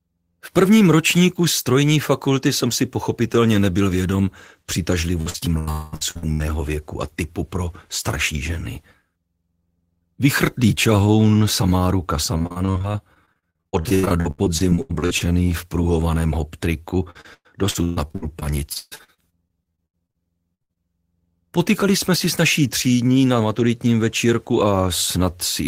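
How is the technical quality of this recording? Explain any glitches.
The recording is marred by network packet-loss faults, clustered from about 5 s and again from 12 s to 21 s.

Repeated packet loss (robotic sound) occurs from 5.21 to 6.42 s, 12.38 to 15.22 s, and 17.10 to 20.17 s. Packets went missing again and again, and each hole was patched by extending the previous sound, so about a third of each stretch is synthetic fill. The gaps run up to 89 ms, 84 ms and 140 ms, giving a choppy, robotic texture with pieces missing.

A long network dropout is the likely cause of the stretch from 5.71 to 5.94 s, inside the first choppy passage. About 220 ms of audio never arrived. The last sound is drawn out as a fading buzz or hiss for the whole gap rather than falling silent, and the audio picks up further on.

A burst of packet loss hits at 20.55 to 20.62 s and again immediately at 20.62 to 20.71 s, losing about 60 ms and 80 ms. 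Each time the receiver carries the last sound forward and lowers it, leaving a held buzz or fading hiss before resuming later.

Short concealed packet loss follows at 20.73 to 20.78 s, where about 20 ms failed to reach the decoder in time. The hole is filled from the preceding sound and blended back in, which is heard as a brief smear or wobble.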